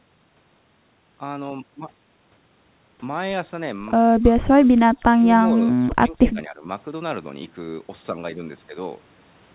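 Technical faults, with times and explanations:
4.2–5.25 s and 5.55–6.67 s, speech suppressed in double talk: the talker's level sags in chunks, about half a second of the first stretch, dropping as much as about 20 dB, then roughly 0.7 s of the second, down by about 15 dB, with a brief recovery in between. The likely cause is the echo canceller getting confused while both ends talked at once, mistaking the near talker for loudspeaker echo and pulling both down.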